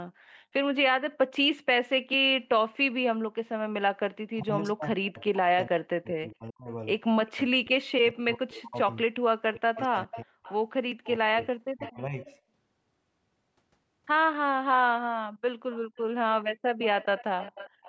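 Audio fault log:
4.35–12.14 s, speech suppressed in double talk: the sound dips by up to about 40 dB, in pieces totalling around five seconds, likely because an echo canceller turned down overlapping talk.
7.27–7.31 s, 9.75–12.38 s, 15.72–17.88 s, echo leak: a copy trails the sound by about 405 ms, very faint at first, later about 15 dB down, likely loudspeaker echo escaping cancellation.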